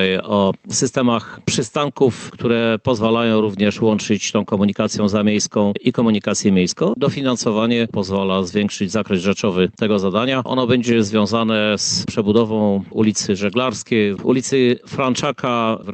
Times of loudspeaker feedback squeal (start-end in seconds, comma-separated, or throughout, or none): none